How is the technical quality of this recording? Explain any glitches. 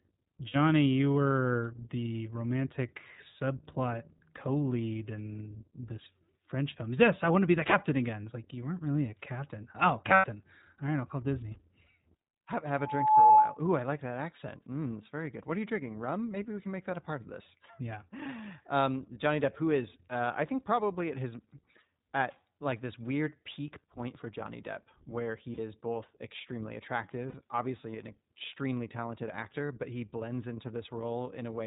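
The recording is speech with audible codec damage throughout, five brief dropouts and one feedback squeal.

iLBC codec (whole clip): The speech was squeezed through the narrowband iLBC VoIP codec, at a rate that fits 15.2 kbps with 20 ms frames. Everything above 4 kHz is gone, so the voice sounds muffled, and the excitation coding leaves it plainly rough and synthetic.

Lost iLBC frames (0.48 s, 10.14 s, 13.26 s, 25.54 s, 27.30 s): Packets went missing, and the decoder bridged each gap by repeating the last pitch cycle mixed with noise. The gaps last 60 ms just before "you were the romantic", 100 ms at 10.14 s, 40 ms at 13.26 s, 40 ms just before "is both extremely", and 40 ms between "is both extremely" and "obviously an extremely talented". The 100 ms gap points to about five lost frames. Each gap is heard as a short held, buzzy vowel. Because every iLBC frame is decoded independently, the voice recovers cleanly right afterward.

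Loudspeaker feedback squeal (12.78 to 13.58 s): The microphone picked up its own loudspeaker, and at 864 Hz the loop gain exceeded one. That tone swells within less than half a second into a squeal around 15 dB louder than the speech, and the 13.26 s dropout falls inside it.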